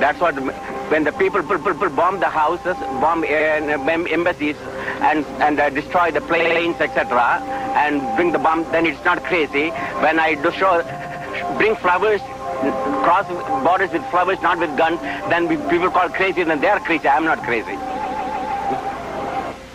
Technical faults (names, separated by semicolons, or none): repeated frames